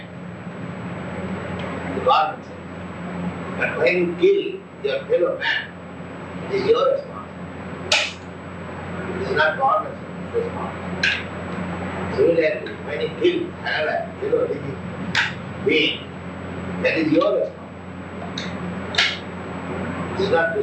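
No technical faults found in the audio; nothing to report.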